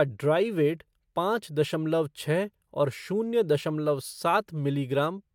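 No technical fault can be heard anywhere in this speech recording. The signal continues without any audible break or disturbance.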